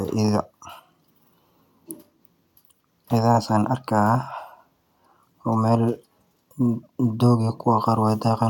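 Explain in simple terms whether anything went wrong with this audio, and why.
Nothing went wrong with this speech recording. Listening through the whole of it, no problem stands out at any moment.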